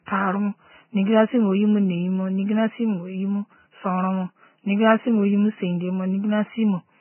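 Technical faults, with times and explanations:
Throughout, Vorbis compression: the speech has likely passed through a heavily squeezed lossy encode at a very low bitrate, stripping everything above about 3 kHz and coarsely quantising what remains, so the treble turns to grainy hiss, tones sound roughened and consonant attacks blur.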